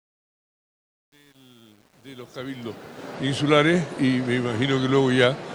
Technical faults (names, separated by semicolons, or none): truncation distortion on a fade